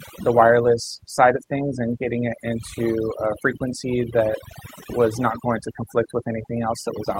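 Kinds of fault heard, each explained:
Overdone noise removal: a noise reduction process applied with too much strength, present across the whole speech recording. Each narrow frequency band is driven down hard whenever its level sits close to the estimated noise floor, so the background is reduced to near silence broken by brief, twinkling specks of residual noise. Low-level parts of the speech are treated as noise too and are stripped out.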